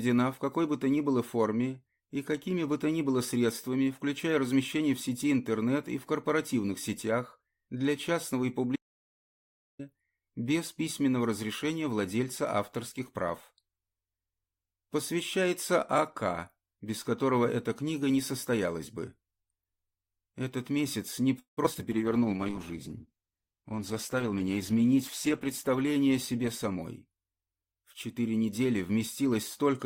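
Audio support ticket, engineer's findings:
Audio dropout to silence, 8.76 to 9.79 s: sound cuts out for about 1.03 s of dead digital silence, no room tone left. Likely the input device or link dropped while the recorder kept writing silence. Whatever happened there is gone.

Repeated packet loss (robotic sound), 21.39 to 21.81 s: choppy stretch with five quick holes, the longest 179 ms. About half the span is patched by stretching the last sound, and roughly 100 ms is simply missing. Classic back-to-back loss concealment.

Call bitrate drop, 21.93 to 27.73 s: sound goes rough and muffled, top end cut. It fits the encoder being squeezed from around 96 kbps down to 12 kbps, sitting at the bottom for about 3.6 s before recovering. Bandwidth estimate collapsed.

Jitter buffer speed-up, 23.57 to 24.51 s: playback runs about 10% fast at unchanged pitch, so it sounds hurried. The receiver was trimming short pitch-period chunks, around a tenth of a second in total, to drain a backed-up buffer.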